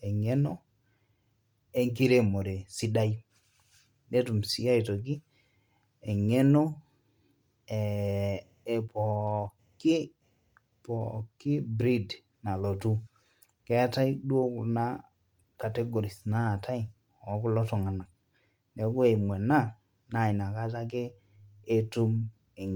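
Throughout the speech there is a plainly audible breathy, grainy edge, with nothing above 20.2 kHz. The likely cause is Bluetooth LC3 compression, consistent with 10 ms frames at around 48 kbps.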